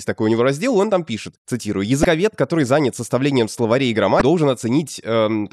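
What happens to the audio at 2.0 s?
Right after "он там пишет цитирую", from 2.01 to 2.05 s, there is damaged data in the compressed stream: corrupted frames force the decoder to lose sync and hunt for the next valid header, producing a brief chirp, squawk, click or short hole before "который занят составлением словарей".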